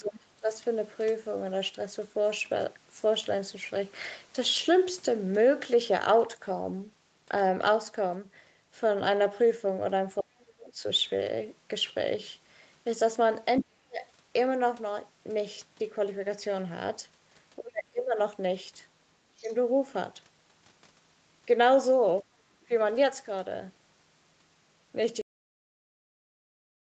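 Speech recorded over a call, with three faults. An echo canceller that likely could not tell the talker from loudspeaker echo during double talk causes speech suppressed in double talk. The voice dips from 0.00 to 0.48 s (by about 25 dB), within 10.19 to 14.05 s (about 40 dB, roughly a second in total) and within 17.58 to 22.71 s (about 30 dB). Incomplete echo removal is the likely cause of the other side's voice leaking through. It shows up as scraps at 0.05 to 0.10 s (about 20 dB below the speech), 10.40 to 10.44 s (about 35 dB below), 13.57 to 13.64 s (about 10 dB below, the most audible) and 19.37 to 19.54 s (about 30 dB below). Finally, the closing buffers were never written, which gives a cut-off end: the sound stops abruptly at 25.22 s and drops straight to digital silence with no natural decay.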